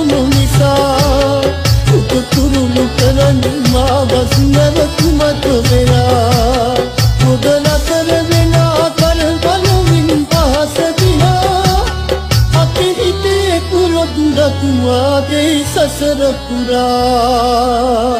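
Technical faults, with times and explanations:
Throughout, hard clipping. The signal is driven about 7 dB past what the chain can pass, so the loudest peaks are sliced flat. Only a small share of the audio sits above that ceiling, around two percent. Those flattened tops create harmonics far up the spectrum that the original sound never had. You hear it as crackle and a rough edge on each peak. The quieter stretches between peaks pass through clean.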